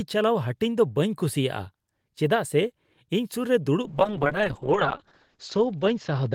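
At 3.82 s, just after "ᱥᱩᱨ ᱨᱮ", a call bitrate drop sets in and runs to the end. The encoder falls from 32 to 7 kbps, bottoming out for 1.42 s, and the band narrows from 20 kHz to 8 kHz, leaving the speech muffled and coarse.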